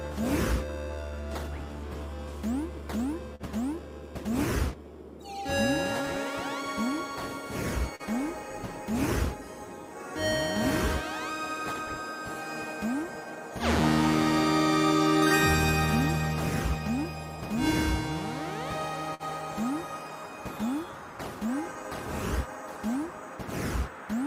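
At 3.35–3.43 s and 19.14–19.23 s, short stalls from a late packet hold the sound for about 41 ms and 51 ms while the jitter buffer runs dry. Each shows as a smeared, repeated stretch in the spectrogram, with nothing lost. At 7.96 s, short concealed packet loss patches 40 ms with 36 ms of synthesized continuation, heard as a brief smear and seen as a blurred gap. From 16.90 to 17.33 s, a jitter buffer speed-up plays about 10% fast at unchanged pitch, trimming roughly 50 ms. The waveform is slightly compressed in time and sounds hurried.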